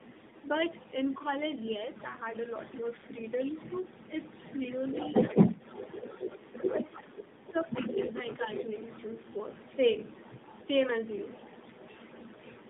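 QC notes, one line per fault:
throughout: tandem speech coding. The sound is rough, muffled and warbly, with nothing above 3.8 kHz. This fits a chain of three speech coders (an AMR-NB-like codec, a CVSD stage, then AMR-NB again), each re-coding the previous one's damage. A single narrowband codec would sound dull but not this smeared.
0.00–7.27 s and 7.47–10.69 s: other side's voice leaking through. A second voice runs under the talker, only slightly quieter. It is likely loudspeaker echo the canceller left in the microphone signal.
6.73–7.98 s: speech suppressed in double talk. The talker's level dips by roughly 20 dB for about a second in total, while the leaked voice is also present. The canceller likely ducked everything when both sides spoke at once. The loss follows the overlap, not network timing.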